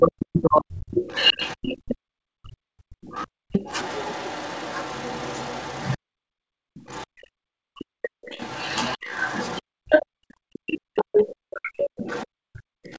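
From 0.00 to 0.96 s the speech dips sharply, by roughly 40 dB at its deepest, in what is likely speech suppressed in double talk: with both sides talking at once, the echo canceller could not tell the local talker from loudspeaker echo and pulled everything down. On a waveform the envelope collapses to a thin line for about a second. On a spectrogram the harmonics fade or break into fragments.

From 0.95 s almost to the end, at 12.89 s, the other side's voice leaks through, likely residual echo the canceller failed to remove from the microphone. It sits about 20 dB below the main speech, so it sounds like a faint second talker underneath. On a spectrogram it shows as weaker, overlapping harmonic traces that do not follow the main voice's contours.

The background is gated by the echo canceller three times: 1.77 to 3.52 s (about 37 dB deep), 5.97 to 7.45 s (about 38 dB), and 9.62 to 12.98 s (about 40 dB). 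Each time, the room tone drops to near silence while the loudspeaker plays, then returns, except the last time, which lasts to the end. On a spectrogram the noise floor empties into dark blocks. On a waveform the low-level hiss between phrases flattens.

Two more brief double-talk suppressions cut into the speech at 7.73 to 8.33 s and 11.51 to 11.74 s, roughly 40 dB deep. Each shows as a sharp notch in the envelope. Throughout, the spectrogram is empty above 8 kHz, which fits the G.722 call codec at 64 kbps.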